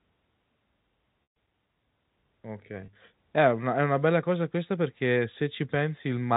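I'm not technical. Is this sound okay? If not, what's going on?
No. At 1.23 to 1.36 s the speech stalls into a held, buzzy tone that fades away, and from 2.81 to 2.95 s it briefly sounds slightly held and buzzy. This is packet loss with pitch repetition: chunks of the call audio went missing, and the receiver filled each gap by repeating the last bit of voice.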